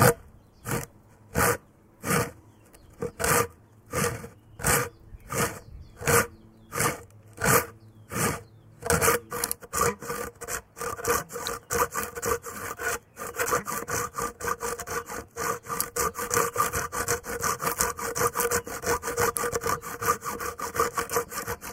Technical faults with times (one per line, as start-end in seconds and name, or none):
11.47 electrical switching spike
19.37 electrical switching spike